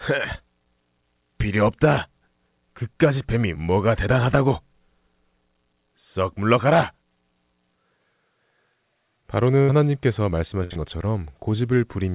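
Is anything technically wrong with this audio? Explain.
Yes, there are dropouts. Two bursts of packet loss hit this speech, at 9.62 to 9.71 s and 10.64 to 10.73 s. Each time about 60 ms of audio never arrived, so the receiver kept extending the last sound and fading it for roughly 64 ms before jumping ahead. You hear a short held-over smear and then a small skip.

Right after the second burst, at 10.73 to 10.78 s, there's a short concealed packet loss. Another 30 ms or so went missing and was patched by continuing the previous sound for about 22 ms and blending back in, giving a quick wobble that runs straight on from the earlier gap.

The call path itself is narrowband, with nothing above 4 kHz, which fits a G.711 A-law codec.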